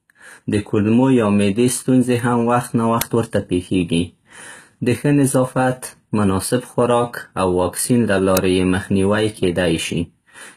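Right from the start the speech has that band-replicated top end you get from HE-AAC compression, likely the cause here. The treble is rebuilt from copied lower bands rather than coded, so s sounds go gritty and lispy. The plainly audible damage fits a low bitrate of around 20 kbps, and nothing sits above 20.4 kHz.

At 3.01 s there's an uninitialised buffer: a block got played before any audio was written into it, so stale memory came out as a sharp, loud crack about 5 ms long, which fits a 256-sample block. The same thing happens again at 8.37 s.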